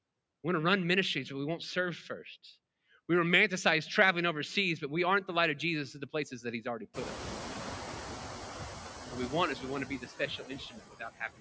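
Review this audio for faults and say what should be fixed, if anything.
Noise suppressor artifacts run through the whole clip. The suppressor lowers the bands it judges to be steady noise frame by frame, cutting the background by only about 6 dB, so the residue sinks between phrases and swells under speech. A gentler, slower-smoothed suppression curve or a better noise estimate would prevent this.

The noise suppressor is catching up from 6.94 to 7.92 s, just after "places that he's already". The room noise jumps by about 24 dB near 7.0 s, and the noise estimate takes 980 ms to adapt, so the louder background arrives with only about 5 dB of reduction before sinking. A faster-tracking noise estimator would shorten this lag.

Speech is cut by the noise suppressor between 9.86 and 11.4 s, after "is we want to". The suppressor mistakes part of the speech for noise and pulls it down by up to about 20 dB, leaving roughly 0.7 s of speech sounding swallowed or faint. 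A more conservative speech-presence decision and a floor on per-band attenuation would protect soft speech.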